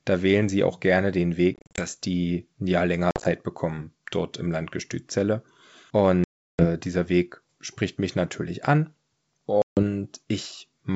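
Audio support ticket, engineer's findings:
Packet loss on the ADPCM call, four dropouts. Silence-filled holes with hard edges, then brief, slightly distorted speech until the decoder's predictor and step size re-sync with the sender, settling within tens of milliseconds. Waveform shows flat near-silent gaps with steps at their edges. Spectrogram shows blank columns.

1.54–1.87 s, after "sie auch gerne den", before "die ja": 170 ms lost in scattered bursts over 240 ms, longest 40 ms.

3.11–3.26 s, after "die ja", before "bekommen dort im": 90 ms over 140 ms, longest 50 ms.

6.24–6.66 s: 350 ms lost, largest hole.

9.62–9.84 s: 150 ms lost.

Component: network path feeding the G.722 decoder at 64 kbit/s.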